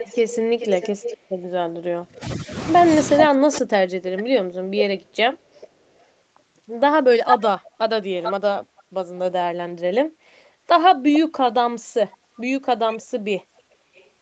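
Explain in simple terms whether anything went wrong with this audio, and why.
Yes, two things went wrong. The first is echo leak. In four stretches, from 0 to 1.75 s, 4.17 to 6.06 s, 7.26 to 8.83 s and 12.12 to 14.09 s, a second copy of the speech trails the original by a little under half a second, about 0.43 to 0.45 s. The likely cause is a loudspeaker on one end whose echo canceller let part of the played-back call slip into its microphone and return. The copy is loudest around 7.3 to 8.8 s and faintest near the end.

The second is speech suppressed in double talk. Between 1.88 and 3.98 s, the main talker's voice sinks sharply or drops out in pieces, adding up to roughly a second and a half of loss, with the deepest dips nearly silencing it. This likely happened because both sides spoke at once, and the echo canceller, unable to tell the talker from the loudspeaker sound, turned everything down together.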